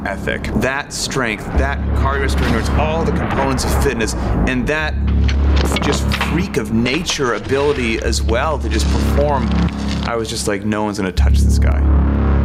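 Throughout the clip the level swings by around 15 dB, leaving loud and soft parts squashed together. This gain pumping likely comes from gain set far too high, with a fast limiter repeatedly clamping down.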